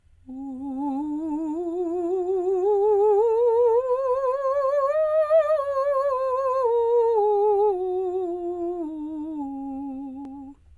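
No faults to report in this music clip; nothing audible calls for attention at any point.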